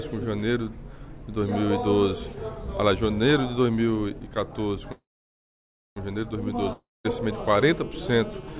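From 4.92 to 5.98 s there is a call audio freeze, likely from packets stalling in transit until the jitter buffer ran dry. The receiver stretches the last sound into a brief fading buzz, then holds silence for about 0.96 s before the audio resumes exactly where it stopped. Nothing is lost, but everything after is pushed about 1.04 s later. A waveform shows a short decaying tail followed by a flat line. On a spectrogram, a smeared sliver gives way to an empty band across all frequencies.

At 6.73 to 7.06 s a long network dropout follows, likely a run of packets that never arrived. Again the last sound is extended as a decaying hiss, fading to silence for roughly 0.21 s. This time, when audio returns, about 0.32 s of material is simply gone and the sound jumps forward. The waveform shows a tapering fill, a flat gap, and then an abrupt restart. A spectrogram shows a discontinuity where the content before and after does not join up.

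From 7.33 s to the end, a GSM phone buzz sits under the audio. A nearby 2G handset in an active call pulses its transmitter about 217 times a second, and the audio circuitry rectifies those bursts. The result is a hard, raspy drone at 217 Hz, about 23 dB below the signal and steady throughout. A spectrogram shows a comb of evenly spaced harmonic lines at multiples of 217 Hz, running up to the 4 kHz ceiling of the G.711 call path. The waveform carries a regular ripple.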